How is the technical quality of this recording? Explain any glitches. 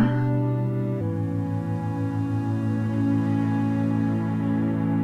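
The recording has one glitch, a section at the wrong speed. From 1.01 s to the end, playback likely ran against the wrong clock at 0.842 times normal speed, so the sound slows abruptly and drops by about three semitones, turning deeper and more sluggish.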